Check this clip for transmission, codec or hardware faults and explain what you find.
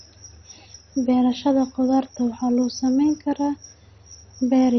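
One fault runs through the whole clip: heavy codec damage consistent with MP2 compression. The speech is dull, with nothing above about 6.2 kHz, and carries a gurgling, granular roughness throughout. The likely cause is an MPEG Layer II encoder starved of bits, which fits a rate near 32 kbps. With that budget the upper sub-bands are switched off entirely, and the remaining bands flicker in and out and are coarsely quantised, producing the watery texture.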